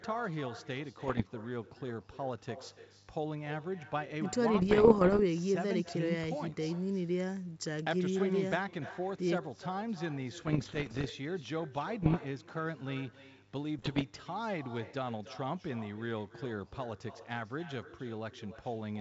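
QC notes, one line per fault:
Throughout: echo with no canceller. The far end is playing the call over a loudspeaker, and its microphone sends that sound straight back with nothing to suppress it. The speech therefore returns after roughly 300 ms of round trip, sitting about 14 dB below the direct signal. Every phrase is trailed by a fainter, thinner copy that lags noticeably behind.
1.01–1.23 s, 4.54–5.20 s, 10.38–11.11 s, 12.02–12.17 s, 13.79–14.03 s: bit errors on an ADPCM link. Around one to one and a half percent of bits are arriving flipped on the coded link. Each bad bit also throws off the decoder's step size and prediction, so the damage keeps ringing for a few milliseconds rather than staying a single click. The result is pops, rough crackly bursts and brief jumps in level, with the longest runs near 4.5 s and 10.4 s. The underlying wideband coding, clear up to about 7 kHz, fits G.722 at its full 64 kbit/s rate.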